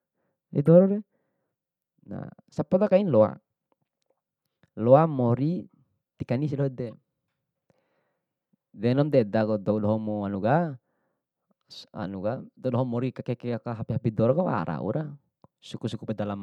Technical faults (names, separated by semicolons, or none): corrupt frame decoded